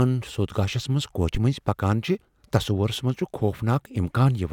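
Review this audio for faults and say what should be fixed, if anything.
A phantom power thump lands at 1.35 to 1.41 s in this speech clip: a short, deep low-frequency knock peaking at about -15 dBFS and dying away within roughly 13 ms. It comes from the supply being switched while the input was live, so the sudden DC step charges through the coupling capacitors and emerges as a single low pulse. On a waveform it shows as one lopsided excursion with a quick tail. A spectrogram shows a brief vertical smear concentrated in the lowest bands. To prevent it, mute or pull down the channel before switching phantom power, and restore the level only once the supply has settled.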